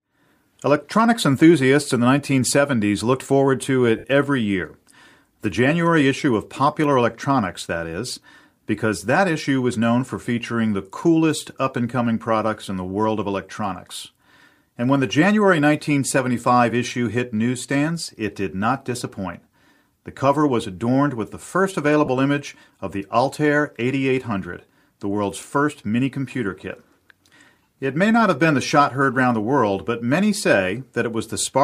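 Lost LE Audio frames interrupt this speech clip twice: Bluetooth packets went missing and the decoder concealed each gap by repeating the previous spectrum with randomised signs. From 3.98 to 4.04 s, after "looked forward to", about 60 ms is patched this way, fitting eight 7.5 ms frames, and the speech smears into a brief noisy hiss. At 22.05 to 22.08 s, between "adorned with the first" and "image of the", a 22.5 ms patch leaves a shorter grainy blur. The light grain is likely from LC3 coding.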